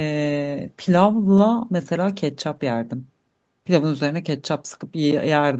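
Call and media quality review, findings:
Nothing stood out on listening to this speech through the call path, with the top end stopping at about 8 kHz as the call's bandwidth limit would give.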